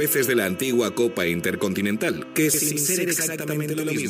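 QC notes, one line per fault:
2.54–4.09 s, channel delay (doubling): one channel falls 92.9 ms behind the other, which fits a 4096-sample buffer. Summed to mono, each sound arrives twice at equal level, heard as a distinct doubling or slap echo until the end.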